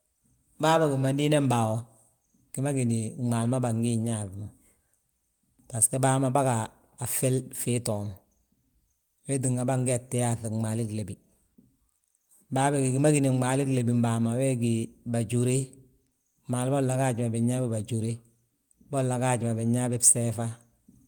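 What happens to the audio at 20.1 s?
Nothing goes wrong at 20.1 s; the speech continues intact through that moment.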